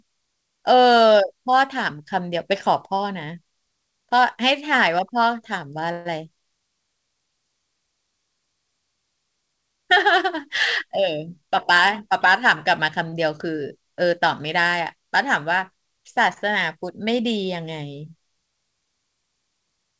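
From 5.92 to 6.07 s the speech breaks into a fading buzz or hiss for about 134 ms, then resumes where it stopped. This call audio freeze was likely caused by delayed packets emptying the jitter buffer. Between 11.27 and 12.44 s the speech runs hurried at the same pitch, about 107% speed. This jitter buffer speed-up trims pitch-period slices, roughly a tenth of a second in total, to cut excess buffered delay. At 13.10–13.14 s and 16.33–16.38 s a sound is briefly held with a slight buzz or dip, 24 ms and 28 ms. Each is a short stall from a late packet, with the last sound stretched until it arrived. The call path leaves nothing above 8 kHz, which fits G.722 coding.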